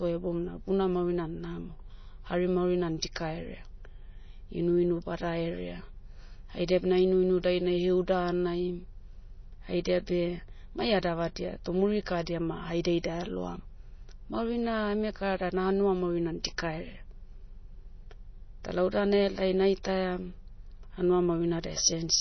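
MP3 compression, likely, runs throughout: nothing above 6.1 kHz survives, and bit-starved frequency lines flicker on and off, giving speech a watery, swirly edge consistent with roughly 24 kbps.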